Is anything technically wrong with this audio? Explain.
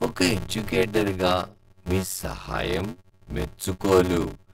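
Yes. A block size mismatch (padded) runs throughout this speech. Each stage writes shorter blocks than the next reads, which fits a 512-sample read, so zeros fill every block's remainder. The speech runs at 0.625 times normal speed, near its usual pitch, under a steady 93.8 Hz buzz from the repeated gaps.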